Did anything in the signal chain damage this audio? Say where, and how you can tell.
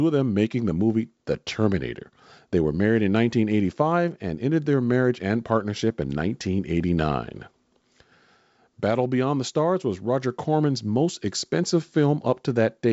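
No, the speech has passed through G.722 wideband telephone coding at what sounds like the full 64 kbit/s rate, with the band ending near 7.7 kHz and any coding trace at most faint, and nothing in the chain has damaged it.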